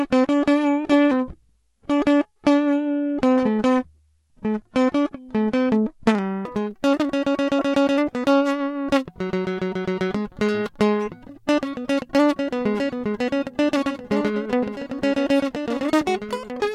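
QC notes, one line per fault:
0.00 to 6.45 s, section at the wrong speed: the music runs at 0.691 times speed, about seven semitones low and dragging, likely a wrong playback clock; pitch and tempo move together, unlike a pitch-shift alone.
7.59 s and 16.36 s, corrupt frame decoded: each a brief chirp-like burst lasting one frame, energy misplaced in frequency, not a click or dropout, because a damaged frame was decoded anyway.
13.77 s to the end, doubled audio track: a second full-band copy about 10 dB quieter trails by roughly two seconds, starting abruptly with no decay or room colour, so not reverb or echo; likely a second capture path.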